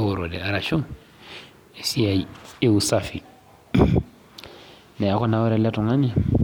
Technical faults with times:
none

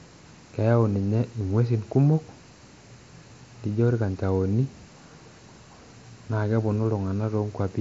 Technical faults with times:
none

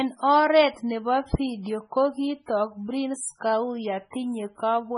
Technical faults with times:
0.00-4.98 MP3 compression

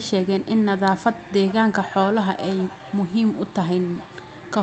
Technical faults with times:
1.35-4.63 feedback echo between two devices

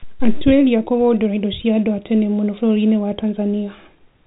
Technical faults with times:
none

